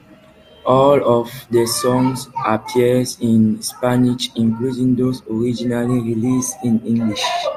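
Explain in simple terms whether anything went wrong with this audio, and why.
Nothing went wrong; the recording has no faults.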